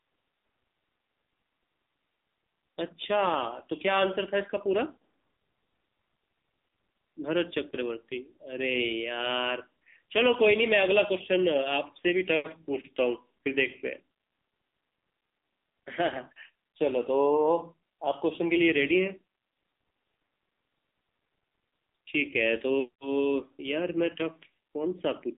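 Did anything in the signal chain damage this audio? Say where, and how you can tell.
Yes. Throughout the recording the speech sounds thin, buzzy and synthetic, with nothing above about 3.8 kHz and little below 250 Hz, so the sound sits in a band of roughly 250 Hz to 3.7 kHz. That points to the codec stage, specifically the AMR narrowband mobile codec (AMR-NB). It samples at 8 kHz and rebuilds speech from a vocal-tract model excited by a few pulses per subframe. The heavy synthetic quality fits a low mode of around 6.7 kbps.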